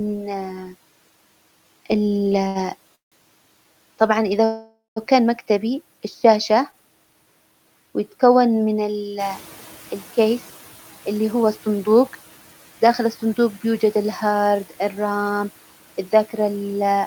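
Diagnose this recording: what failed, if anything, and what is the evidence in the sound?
Speech holds and drags at 2.47–2.57 s and again at 6.71–6.75 s, with a slight buzz or dip. These are short stalls from a late packet at the network stage: the jitter buffer ran dry and the receiver stretched the last sound by about 78 ms and 18 ms, then resumed with nothing lost.

The audio freezes twice: at 2.95–3.14 s the held sound decays into about 140 ms of silence, and at 4.44–4.98 s a longer fill of about 520 ms ends in about 160 ms of silence. Playback then picks up where it stopped. This is a call audio freeze, likely from packets held up in the network so the jitter buffer emptied, inserting gaps rather than dropping audio.

Background noise jumps by about 10 dB around 9 s and comes through with less reduction at first, then sinks gradually between 9.19 and 10.59 s. This is the noise suppressor catching up in call processing: its noise estimate lagged the rise and took about 1.4 s to adapt, finally cutting about 7 dB.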